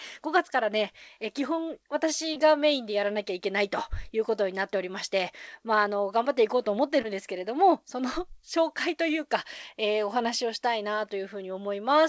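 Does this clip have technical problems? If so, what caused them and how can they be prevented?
Yes, there's short concealed packet loss at 2.34 to 2.38 s and 7.02 to 7.06 s. About 20 ms of audio arrived too late each time, and the receiver papered over it by extending the preceding sound, giving a quick smear. A steadier network connection or a somewhat deeper jitter buffer would keep those packets from missing their playout deadline.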